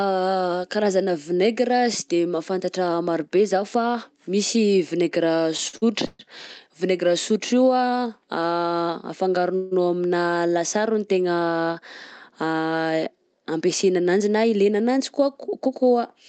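From 5.57 to 6.21 s the speech catches and drags four times, with the last sound stretched and smeared across each pause, the longest about 129 ms. These repeated stalls (stutter) come from packets arriving late, so the jitter buffer kept running dry. The receiver filled about 233 ms, over a third of that stretch, and nothing is lost.

At 9.56 s the speech halts for 155 ms and the last sound hangs on as a fading buzz or hiss, without dropping to silence, before resuming exactly where it stopped. This call audio freeze was likely caused by packets held up in transit, emptying the jitter buffer and adding 155 ms of delay.

From 13.38 to 14.89 s the speech sounds rushed, running at about 110% speed while the pitch stays the same. This is a jitter buffer speed-up. Too much audio had built up, so the receiver cut out many tiny pitch-period slices, roughly 150 ms in total, to reduce the delay. 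Throughout the clip the Opus call codec limits the audio to about 8 kHz.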